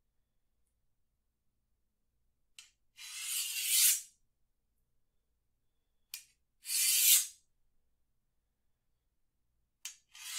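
A recording of everyday sounds, with no technical faults to be heard anywhere in the signal.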